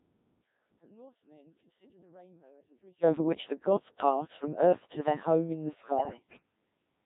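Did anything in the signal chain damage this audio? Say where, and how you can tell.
Yes. The codec stage did the main damage: the whole clip has the robotic, buzzy character of the Codec 2 vocoder, heavily degraded. The decoder rebuilds the speech from pitch, voicing, energy and envelope alone, and the thinness fits a very low-rate mode around 1.3 kbit/s.

There's also a burst of bit errors on digital voice radio from 5.97 to 6.42 s, right after "their home in the". Pitch, level and tone lurch into warbly gibberish there. That sounds like roughly one bit in ten getting flipped over the air before decoding.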